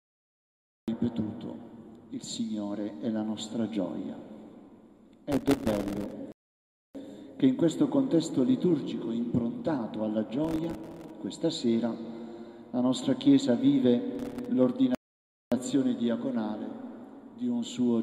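The clip opens with a cut-off start: digital silence until 0.88 s, then the sound enters mid-event with no attack or fade, because capture began late and the first audio arrived already in progress.

From 5.32 to 6.13 s there is processor overload crackle. The system could not fill its very short audio buffers, each a millisecond or two, in time, and about a hundred misses in a row left tiny silent gaps with hard edges. It sounds like gritty tearing layered over the sound.

A rebuffering stall follows from 6.32 to 6.95 s. Playback ran dry and paused until more data arrived. The sound drops to silence, then resumes exactly where it stopped, adding about 0.63 s.

The crackle returns from 10.45 to 11.10 s and again, more briefly, from 14.15 to 14.46 s. A second stall runs from 14.95 to 15.52 s and adds about 0.57 s.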